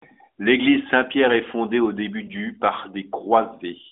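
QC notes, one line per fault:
2.26 to 2.31 s, lost AMR speech frame: a single 20 ms frame failed its checksum, so the decoder filled the gap by repeating the last good pitch and vocal tract settings at reduced gain. The result is a brief dip or warble, followed by a rough recovery, rather than silence. A plain dropout would cut to silence, and a click would leave a sharp edge. The surrounding band-limited mobile sound fits AMR narrowband at 12.2 kbps.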